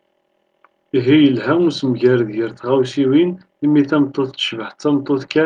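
Nothing in this bit of speech stands out as a technical fault; it's all fine as far as the ear can tell.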